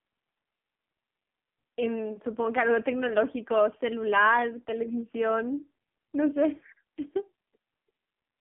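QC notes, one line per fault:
Throughout: AMR narrowband mobile codec. The band is only 200 Hz to 3.5 kHz. Heavy coding leaves speech buzzy and synthetic, which fits a rate near 5.9 kbps.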